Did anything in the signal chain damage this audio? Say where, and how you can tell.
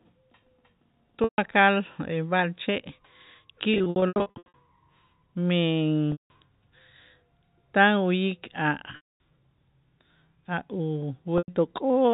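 Yes. Packet loss with pitch repetition, on the network, at 1.24–1.38, 3.74–4.54, 6.12–6.30, 8.96–9.19 (after "tan uyik") and 11.38–11.48 s. The receiver looped the last pitch period, giving a held buzz. At 3.74 s, short dropouts stutter across 0.8 s. The gaps fit 20 ms packets.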